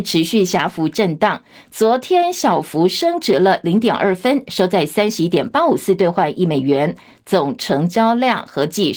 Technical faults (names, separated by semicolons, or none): none